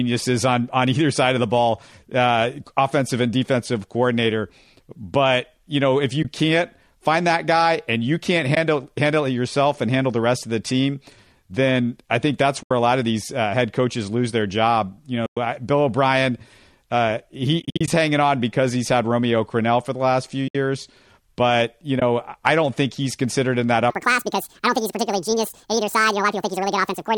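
The speech drops out in short, soft-edged holes from AAC frame loss with muting. They occur at 6.23–6.25 s, 8.55–8.57 s, 12.63–12.71 s, 15.26–15.37 s, 17.60–17.88 s, 20.48–20.55 s and 22.00–22.02 s. Whole frames of the stream went missing, and the decoder filled each gap with silence. The overlapping windows fade the sound down and back up. Three of the gaps are brief, 20 ms, a loss that fits about two frames. The one between "then I think that's" and "a lot of these" lasts 80 ms. The gap at 15.26 s lasts 110 ms. The worst comes after "uh he". There, 180 ms of losses are scattered over 280 ms before "hanging on because he's", and the longest silent run is about 70 ms. The last gap comes just before "I don't think he's".

From 23.90 s to the end, a section plays at the wrong speed. It runs 1.78 times too fast. Pitch and tempo rise together, about ten semitones higher. The voice sounds squeaky and rushed. 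The likely cause is playback on a mismatched clock.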